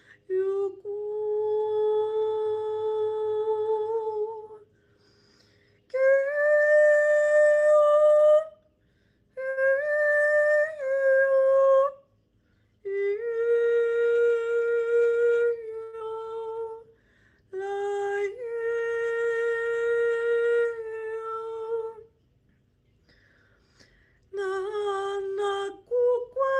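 At 9.49 s a packet fails to arrive on time and the jitter buffer runs dry, causing a short stall from a late packet. The receiver holds the last bit of sound for about 75 ms until the packet turns up, then resumes exactly where it left off. Nothing is lost, but the sound lingers unnaturally, with a faint buzzy sustain. The same thing happens at 15.83 s, this time stretching the held sound to about 98 ms before playback catches up.

That second stall raised the delay, and at 15.99 s the receiver jumps forward, a skip ahead. Roughly 70 ms of audio is thrown away while later material is already queued, cutting the delay by about 50 ms. The two sides are spliced almost directly, with only about 11 ms of fill between them, so the sound lurches abruptly rather than pausing.

From 16.47 s to 16.78 s the receiver applies a jitter buffer slow-down to rebuild its reserve. It repeats small pitch-period-sized pieces over and over, adding about 53 ms in total, so this stretch plays at about 85% speed. 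The pitch stays put while the sound drags, drawn out.

At 24.21 s the opposite problem appears: the buffer holds more audio than its target, triggering a jitter buffer speed-up. Until 24.53 s the receiver trims short pitch-period slices in quick succession, removing roughly 40 ms. Playback runs at about 111% speed at unchanged pitch, so the passage sounds briefly rushed and crowded.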